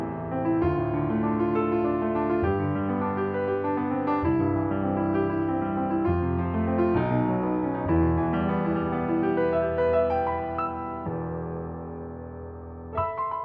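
No technical faults can be heard anywhere in the audio. Nothing breaks, stalls or shifts at any point along the way.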